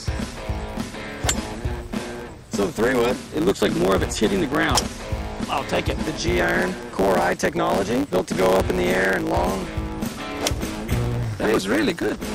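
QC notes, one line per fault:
Throughout: block size mismatch (truncated). A steady buzz at 109 Hz sits under the sound for the whole clip, and everything moves about 1.09 times faster than it should while keeping close to its normal pitch. One stage hands over blocks larger than the next stage takes in, so the tail of every block is discarded. Each cut leaves a small seam, giving the buzz at the block rate, and the lost slices shorten the timeline by that 1.09 ratio.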